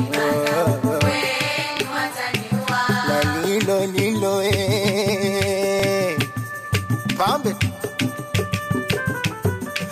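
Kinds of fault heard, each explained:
Overlapping chunks: each new block of audio begins slightly before the previous one finished, so about 25 ms of sound is played a second time at the join. It shows as a brief stutter-click at 1.77–1.80 s and again at 5.80–5.82 s, about 4 s apart, matching a steady chunk length. Unlike a dropout, nothing is missing; the sound repeats, nudging everything after it slightly later.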